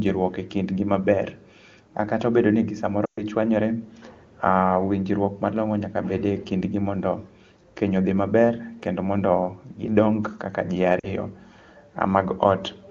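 Speech clip with lost AMR speech frames: after "obedo ni ji" at 3.06–3.23 s the sound drops to near silence for roughly 120 ms, and after "mondo gidong kaka ji" at 11.00–11.14 s there's a shorter 40 ms dropout, where the decoder was patching over corrupted frames.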